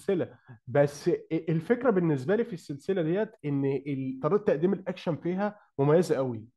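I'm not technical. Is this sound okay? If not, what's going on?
Yes, this speech recording sounds fine, with nothing going wrong anywhere in it. There's nothing here that needs fixing.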